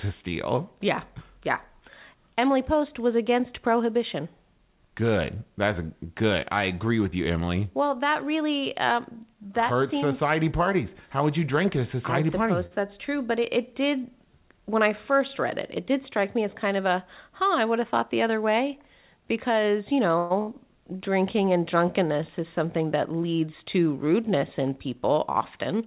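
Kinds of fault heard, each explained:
Short stall from a late packet: at 12.66 s one packet turned up late, so the receiver held the last bit of speech for about 46 ms until it arrived, then carried on from the same spot. Nothing's lost, but that sound hangs on a touch too long with a slight buzz or dip, and everything after it sits 46 ms later.
Jitter buffer speed-up: the buffer had built up more audio than it wants, so the receiver kept snipping out tiny pitch-period-sized pieces to catch up. Pitch stays put but the talking runs a bit quick. It happens at 15.8 to 16.65 s, after "I first read it", at about 5% fast with roughly 50 ms trimmed, and again at 22.4 to 23.13 s, after "drinking and drunkenness", at about 4% with around 40 ms gone.
Call audio freeze: right after "other way because you", at 20.18 to 20.32 s, the sound stalls and the last bit gets drawn out as a fading buzz or hiss for about 121 ms, never dropping to silence. 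Then it picks up exactly where it left off, so nothing's missing, just a gap pushed in. The likely cause is packets held up in transit with the jitter buffer running dry.
Burst of packet loss: at 20.42 to 20.5 s, about 60 ms of audio simply never made it in time. The receiver papered over it with roughly 56 ms of the previous sound, trailing off, then jumped ahead, so that slice of speech is genuinely gone rather than just delayed. It lands just after the freeze.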